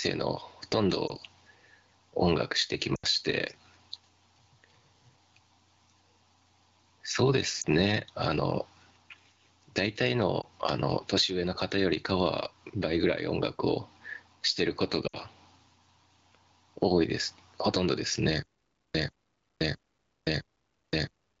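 Throughout, the gain swings by about 15 dB. This gain pumping is likely from excessive input gain driving a fast limiter.

Brief dips or warbles at 1.07, 7.61 and 10.41 s, and longer drops toward near silence from 2.95 to 3.06 s and 15.07 to 15.16 s, are lost AMR speech frames. The wideband decoder stretches the last good sound with falling gain, and each dip fits a single missing 20 ms frame.

From 18.42 s to the end, a 0.14 s burst repeats every 0.66 s with 0.52 s of digital silence between. This stutter with silent gaps likely comes from a stalled stream replaying its last fragment.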